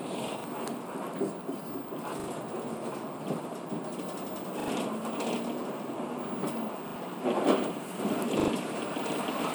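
At 0.40 s the sound stutters briefly. This is a repeated buffer: fresh audio failed to arrive in time, so the last block, whose length fits a 40 ms buffer, played a second time. At 2.20, 4.60, 6.88 and 8.40 s the same block sounds three times over, with a hard join at each repeat, and a short stretch of the following audio is lost. On a waveform, identical segments sit side by side with abrupt seams. A spectrogram shows the same pattern copied, with vertical edges at each join.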